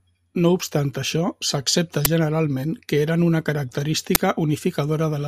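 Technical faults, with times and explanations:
2.05 s (after "obstant això s'accepta") and 4.15 s, uninitialised buffer: each time a 10 ms block played before the audio was written, so leftover memory became a loud crack.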